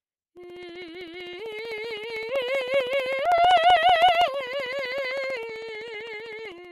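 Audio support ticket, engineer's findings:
Periodic USB or driver dropouts, 0.05–6.65 s: regular ticks through the music every 64 ms (about 16 per second), each a gap of around 2 ms filled with silence. Fixed spacing rules out random buffer underruns; suspect a background task blocking USB or driver.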